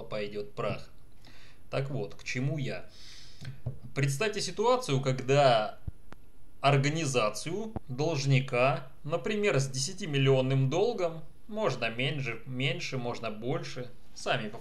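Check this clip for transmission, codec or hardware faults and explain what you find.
Two loud pops. At 5.88 to 6.15 s there's a quick double pop, and at 7.76 to 7.79 s a single sharper one, about 5 and 10 dB above the sound, which keeps going underneath. A voltage spike from a plug, switch or static is the likely cause.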